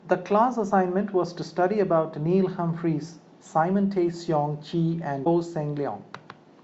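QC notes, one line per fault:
5.24–5.27 s, broken MP3 bit reservoir: speech skips ahead through a 30 ms patch, likely from a cut frame.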